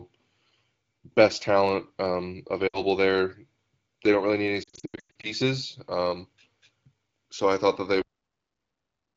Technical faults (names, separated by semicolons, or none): lost AMR speech frames; cut-off end